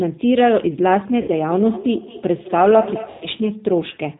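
Throughout, the speech carries G.729 codec damage. The sound is band-limited, with nothing above 4 kHz. It sounds slightly rough and synthetic. That fits an 8 kbit/s codec rebuilding speech from a filter, a pitch predictor and sparse pulses.

At 1.22 s, VoIP packet loss concealed by the speech codec begins. About 60 ms of audio, ending at 1.31 s, is missing. The decoder stretches its last pitch and filter into a fading buzzy tone or coloured noise. A longer loss follows, from 3.10 to 3.26 s, covering 110 ms.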